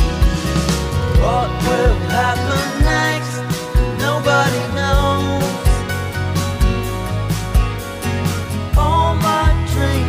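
No technical faults are present anywhere in the clip.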